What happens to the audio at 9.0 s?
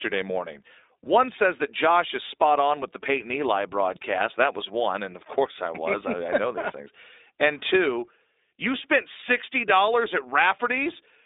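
At 9.0 s the speech carries the same iLBC codec coloration heard across the whole clip, not a separate event. The audio is confined to a telephone band of roughly 300 Hz to 3.7 kHz, so it sounds thin and boxy. Each short frame's excitation is coded on its own, which fits a 20 ms frame at the 15.2 kbps mode, leaving a plainly audible rough, synthetic edge on the speech.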